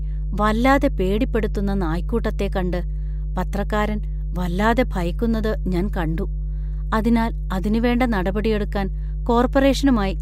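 From start to finish there's mains hum, a steady 50 Hz drone from a ground loop or nearby transformer, sitting only slightly below the speech in level.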